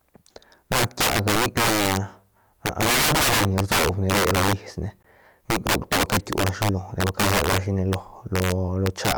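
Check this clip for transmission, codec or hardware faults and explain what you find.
Two faults are present in this speech clip: integer overflow throughout, and one gap at a join of encoded pieces.

Integer overflow runs through the whole clip. The signal is driven about 17 dB past full scale. Instead of being held at the ceiling, each sample beyond it wraps around to the opposite extreme. A few percent of samples go over, so every loud syllable breaks into a tearing buzz. Clipping would flatten those peaks into a buzzy fuzz. Here the waveform jumps across the full range, making the sound far sharper and more explosive.

The gap at a join of encoded pieces falls at 5.03 s and lasts about 18 ms. The audio seems to have been encoded in separate sections, with joins spaced 6 s apart, and put back together without trimming. The encoder's start-up delay and the padding in the last frame both remain in the file. 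The speech stops dead in a brief hole with smeared edges, then resumes exactly where it left off. A dropout that lost audio would skip ahead instead.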